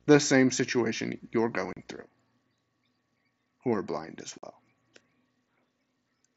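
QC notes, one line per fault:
0.00–2.02 s, video or display buzz: a faint buzz at the 60 Hz field rate, roughly 40 dB below the speech, with a fizzy hash riding above it. A screen or video cable is coupling its picture-rate pulses into the audio path. Unlike plain mains hum, it has a rasping, pulse-like edge and broadband hash rather than a smooth low tone. It also stops dead at 2.02 s instead of running under the whole clip.
1.73–1.77 s and 4.38–4.43 s, unconcealed Bluetooth headset packet loss: the speech drops to hard-edged holes of 37.5 ms and 45 ms, the second just after "who are blind as". Headset voice packets never reached the phone, and the gap was filled with nothing rather than patched over. The abrupt cut sets it apart from the mSBC codec's light graininess and flickering upper bands, which thin the sound without ever silencing it.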